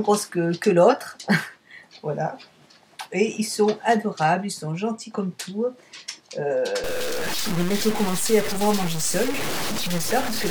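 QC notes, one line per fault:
6.84 to 10.5 s, low bit depth without dither: From 6.84 s to the end, the sound turns coarse and grainy. The grit rises and falls with the signal. Quiet passages break up, sputtering or dropping out between steps. The error sits only about 10 dB below the signal. This is likely the result of rounding to very few levels with no dither, which fits truncation to around 4 bits.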